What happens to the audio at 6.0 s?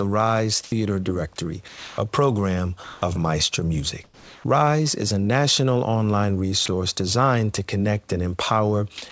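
Nothing goes wrong at 6.0 s, and the audio is intact there.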